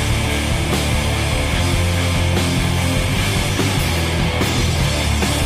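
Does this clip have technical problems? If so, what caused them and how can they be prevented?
Yes. From 2.73 s to the end, an adaptive stream switched to a lower bitrate after the connection slowed, so codec artefacts abruptly rise without any gap, consistent with a step from 64 to 24 kbit/s Opus. A larger playback buffer or a steadier connection would keep the stream on its higher-bitrate version.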